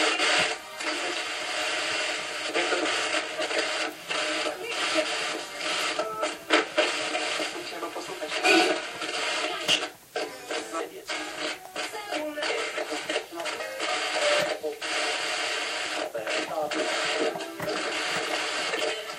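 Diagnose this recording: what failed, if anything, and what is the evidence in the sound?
The fault sits at the codec stage, with compressed frames skipped. The audio jumps forward at 3.45, 7.65, 10.79 and 15.13 s, losing roughly 200 ms, 100 ms, 100 ms and 50 ms. Each gap fits a whole number of 23.2 ms codec frames. Either the frames were missing from the file or the decoder rejected them as damaged. Playback simply resumes at the next good frame, so there's a short blip at each join.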